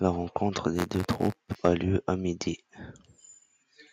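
From 0.75 to 1.55 s, buffer tearing adds a robotic 93.8 Hz rattle, which fits a 512-sample buffer. Stale audio is spliced into each period, so the rattle is steadily periodic and only sounds with signal. From 1.65 to 1.70 s, just before "lieu à", microphone overload flattens the peaks by about 4 dB, likely from excessive input gain. It is a brief harsh crackle on loud syllables, not a continuous buzz. From 2.24 s to the end, after "lieu à", channel delay (comb filtering) appears. A roughly one-sample lag summed to mono puts the first notch near 20 kHz, so the top end is slightly dulled and static rather than sweeping.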